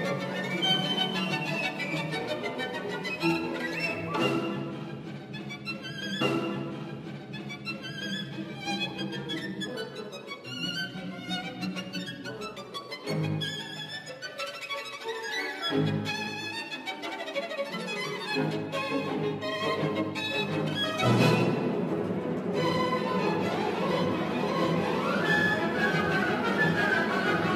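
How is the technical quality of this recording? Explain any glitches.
The recording has one clear glitch. A stream segment is repeated from 6.20 to 8.20 s: the player queued the same chunk twice, so about 2.0 s replays after a brief blip at the jump back.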